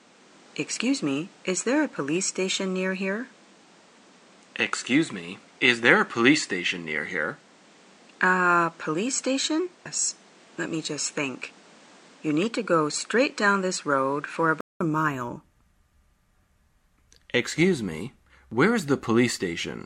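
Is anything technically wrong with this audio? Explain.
Yes, there are two faults.

From the start to 14.81 s the band stops at 10 kHz, with added hiss roughly 30 dB under the signal, and the level doesn't change. This is likely an input switched to a poorer device. At 14.81 s a 200 ms silence marks the switch back, and the sound opens up again.

At 9.85 s the sound jumps abruptly forward with a small blip. That discontinuity is likely a stream segment skipped: one chunk of the segmented stream failed to load, and the player continued from the next, so part of the programme is missing.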